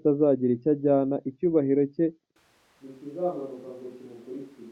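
At 2.36 s the speech abruptly turns roomy and hollow, loses bass and falls roughly 10 dB, with room noise around 25 dB below the speech, through to the end. This is likely a switch to a distant microphone after the close one dropped out.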